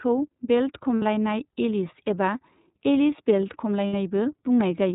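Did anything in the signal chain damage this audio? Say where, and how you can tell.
Yes. Throughout the clip the speech is narrowband, with nothing above 4 kHz, and plainly rough and slightly synthetic. This damage comes from the codec stage. The iLBC codec, consistent with its 13.33 kbps mode using 30 ms frames, codes each frame's excitation independently and discards the upper band.

At 0.97 to 1.03 s and again at 3.87 to 3.94 s, the speech briefly turns into a held, faintly buzzy vowel-like tone, then comes back right away. These are lost iLBC frames from the network. The decoder filled each gap, consistent with two missing 30 ms frames, by repeating the last pitch cycle mixed with noise. Because every frame decodes on its own, recovery is immediate.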